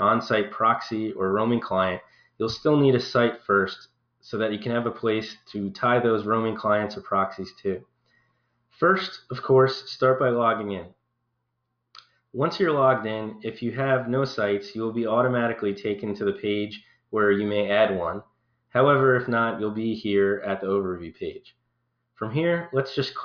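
No technical faults can be heard anywhere in the audio.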